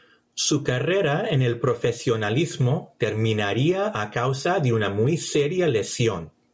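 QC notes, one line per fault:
Throughout: gain pumping. The gain swings by around 10 dB, so loud and quiet passages sit unnaturally close in level and the speech sounds squashed. This is likely input gain set far too high for the microphone, with a fast limiter or compressor clamping down on each peak and releasing in the gaps, beneath a call-style band limit that stops at 8 kHz.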